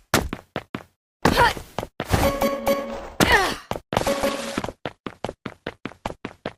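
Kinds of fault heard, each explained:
Adaptive stream at a lower bitrate: at 3.98 s the audio drops abruptly, with no gap, to a lower-quality version that lasts to the end. This happens when a streaming player switches to a cheaper encoding because the connection has slowed. Nothing is heard above about 12.1 kHz from that point, and the band-limited treble with added codec artefacts fits a fall from roughly 64 to 16 kbit/s Opus.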